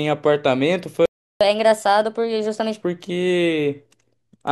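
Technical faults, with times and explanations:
1.06–1.41 s, playback stall: the speech halts mid-flow and the output stays silent for about 0.35 s, likely because the player ran out of data or its thread was blocked. The waveform drops to a flat line, and the spectrogram shows a blank vertical band.
1.41–2.81 s, catch-up at higher speed: the player works off its backlog by resampling at 1.25 times normal speed, so the speech sounds hurried and about four semitones higher before it settles back. On a spectrogram the harmonics sit higher and the syllables look squeezed in time.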